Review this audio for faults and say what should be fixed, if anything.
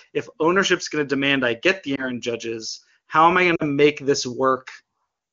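Lost AMR speech frames at 1.95 to 2.07 s and 3.55 to 3.63 s: the decoder conceals each gap by repeating the last good pitch and vocal tract settings at falling gain, heard as a brief dip or warble for the single lost frame and a drop to near silence for the two-frame run. The first fits one lost 20 ms frame, the second two (40 ms). Improve radio link quality or channel coding so fewer frames fail their checksum.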